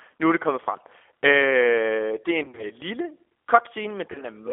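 Right from the start you can hear the G.729 codec at work. It's an 8 kbit/s coder rebuilding the speech from a vocal tract filter, a pitch predictor and a few pulses per frame, so there's a plainly audible rough, synthetic edge, and the band sits at about 300 Hz to 3.5 kHz.

Then at 2.44 to 2.66 s there's VoIP packet loss concealed by the speech codec. About 110 ms of audio goes missing, scattered over 140 ms, with the longest gap 40 ms. The decoder fills each gap by extending its last pitch and filter while lowering the gain, so you get a buzzy or noisy smear that fades, and the voice sounds off for a moment after. Another loss hits at 4.12 to 4.24 s, about 30 ms of it, with the same stretched, fading patch.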